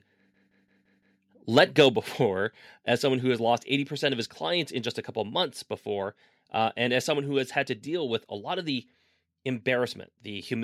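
From 0.34 to 1.20 s there is a system hang loop. The system froze while the sound hardware kept replaying its ring buffer. One 170.67 ms slice repeats five times, about 5.86 times per second. It sounds like a hard, machine-gun stutter. The length fits an 8192-sample buffer.

From 1.57 to 1.86 s comes microphone overload. The loudest peaks push past the converter's limit by about 4 dB. A small share of samples have flattened tops. This gives a harsh, crackling edge. The likely cause is microphone input volume set too high.

At 1.96 s the microphone volume steps down. The level of speech and background drops by about 5 dB in a single step. It comes just after the distorted peaks. This is likely the call software cutting the device's input volume to stop the clipping.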